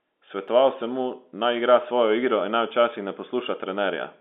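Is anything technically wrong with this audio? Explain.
Yes, there is one fault. Dropped samples at 0.48 s, just before "sem mu naj igra": a single sharp click cuts into the speech. The likely cause is that a handful of samples, well under a millisecond, went missing from the stream. The waveform then jumps straight from one value to a later one. No sound is lost, but the sudden step puts a brief burst of energy across the spectrum, which is heard as the click. The telephone-band G.711 coding, which cuts off everything above about 4 kHz, is not a fault.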